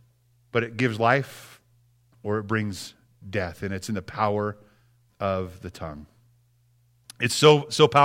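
No dropouts, clicks, distortion or other technical faults can be heard anywhere in the recording.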